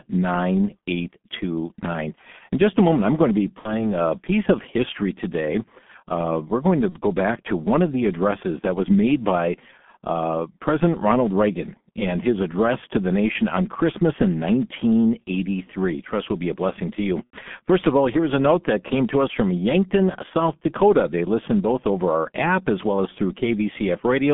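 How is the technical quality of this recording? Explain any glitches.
The technical quality is poor. The whole speech recording passes through the G.723.1 codec, and three brief dropouts are covered by packet loss concealment.

G.723.1 codec damage runs throughout. The band sits at roughly 150 Hz to 3.5 kHz, so the upper range is gone. The codec models the voice in 30 ms frames at a very low rate, which fits a 6.3 kbit/s setting. The damage is heavy. The speech sounds muffled and hoarse. Consonants blur because the voice model updates too slowly to track them.

VoIP packet loss concealed by the speech codec occurs three times. The first is from 3.59 to 3.91 s, after "I'm going to be" and before "a piece of history". About 60 ms are missing there, which fits two lost frames. The second is from 6.90 to 7.00 s, between "we're going to" and "back to one of". About 30 ms are missing, which fits one lost frame. 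The third is from 17.24 to 17.37 s, just after "a blessing to you". About 90 ms are missing, which fits three lost frames. At each gap the decoder repeats its last pitch and filter at falling gain, so the sound smears into a fading buzzy tone or coloured noise. Each frame builds on the one before, so the speech stays weak or distorted briefly after the packets return.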